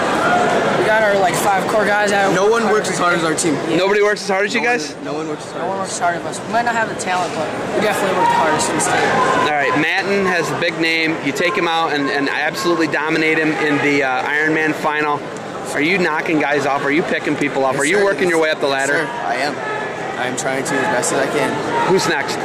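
Hard clipping runs through the whole clip: the signal is driven about 4 dB past what the stage can pass, so only a small share of samples, around one and a half percent, are sliced flat at the peaks. It sounds like crackle on the loudest moments. The waveform shows squared-off tops, and the spectrogram shows broadband harmonic streaks above each peak.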